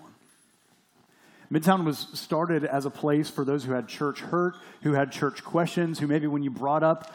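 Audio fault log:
No technical faults can be heard anywhere in the signal.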